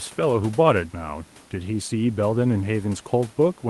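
No technical faults can be heard anywhere in the speech. The WebRTC call path comes through with its top end rolled off around 12 kHz, which fits an Opus super-wideband setting, and the room noise sits about 30 dB below the speech.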